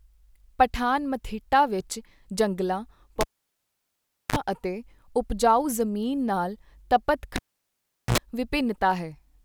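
Cable pulled and plugged in at 3.21 to 4.36 s and 7.36 to 8.18 s: pop, near silence, then a brief 50 Hz, then 60 Hz, mains buzz before the return pop. That buzz marks it apart from a plain dropout.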